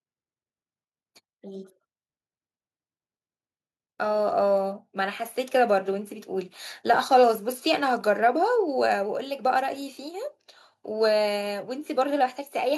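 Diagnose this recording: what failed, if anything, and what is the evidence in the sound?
Automatic gain rising in call processing: from 4.0 to 6.6 s speech and background swell together by about 6 dB, a waveform envelope ramping steadily upward.

Automatic gain falling, same call-processing stage: from 6.83 to 9.01 s level sinks about 3 dB, speech and noise floor dimming together across the spectrogram.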